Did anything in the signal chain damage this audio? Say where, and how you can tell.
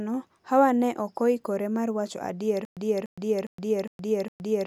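Yes, at playback. Just after "mar wacho adier," from 2.65 s to the end, there's a stutter with silent gaps: a 0.29 s burst repeats five times, each followed by 0.12 s of digital silence. Likely a stalled player replaying its last fragment on each retry, so the real audio is lost.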